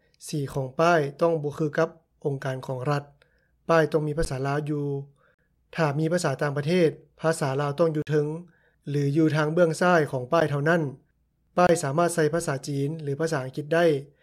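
Blocks of digital silence at 4.25, 5.34, 8.02, 10.40 and 11.67 s cut the sound out abruptly, leaving gaps of 12 to 46 ms. All but the one at 5.34 s fit 512-, 1024- and 2048-sample buffers, likely ones that weren't filled in time.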